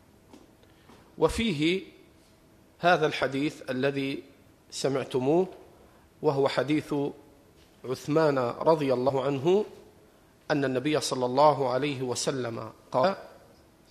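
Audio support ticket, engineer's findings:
Compressed frames skipped, 9.08–9.10 s and 13.03 s. Audio jumps forward, about 70 ms then about 200 ms lost. Decoder-side: gaps fit roughly three and seven whole 23.2 ms frames missing or rejected as corrupt.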